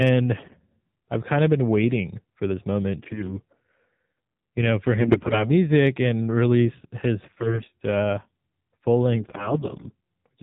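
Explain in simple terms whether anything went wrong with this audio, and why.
The speech went through the AMR narrowband mobile codec, the compression used on older mobile calls. It keeps only the sound below 4 kHz and rebuilds the voice from a simple model of the throat and mouth, using very little data. That is why the whole clip sounds muffled and buzzy and artificial, like a phone call rather than a recording made in the room.

On top of that there are AMR bit errors: some of the less protected data in the compressed stream arrived corrupted, but the stream still decoded. The voice keeps roughly its pitch and loudness, but in those moments it turns hoarse, scratchy and gargly. This happens from 0.38 to 0.55 s, just before "I've kind of been"; from 2.98 to 3.34 s; from 5.01 to 5.50 s, between "you know for" and "and release his"; from 7.24 to 7.69 s, between "and release his" and "uh full"; and from 9.14 to 9.89 s.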